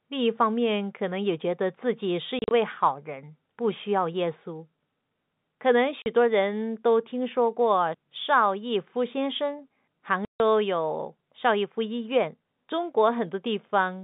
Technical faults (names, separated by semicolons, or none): packet loss filled with silence